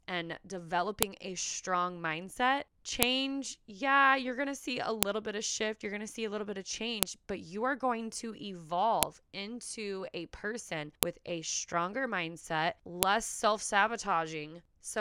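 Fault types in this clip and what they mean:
File header played as audio: a sharp, loud click snaps through the speech every two seconds, at 1.03, 3.03, 5.03, 7.03, 9.03, 11.03 and 13.03 s, for instance just before "a strong mindset" and between "into a person" and "with a stronger mindset". Each click lands regardless of what the speech is doing, because the audio was assembled from 2-second pieces whose WAV headers were left in and played out as a brief burst of samples.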